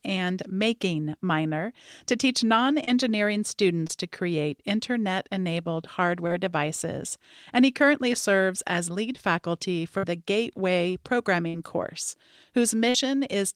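At 2.84, 3.87 and 6.27 s there is short concealed packet loss. The 3.87 s gap falls just before "to create internet enabled", and the 6.27 s gap sits between "to create internet enabled" and "devices and he currently". Each time, about 20 to 30 ms of the call arrived too late, and the receiver bridged the hole by extending the preceding sound before blending back. The result is a brief smear or wobble. On a spectrogram the harmonics or noise pattern freeze into a short flat strip, and the waveform shows a slightly too-regular stretch.

At 9.98 s, just after "serves as lead faculty", and again at 11.48 and 12.89 s, there is a burst of packet loss of about 50 ms each. Several packets in a row failed to arrive, so the decoder prolonged the last sound while fading it down. That gives a held buzz or dying hiss, and then the audio jumps forward past the missing stretch. On a spectrogram this appears as a smeared band that decays and then breaks off sharply. 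In the waveform the envelope tapers and then restarts abruptly.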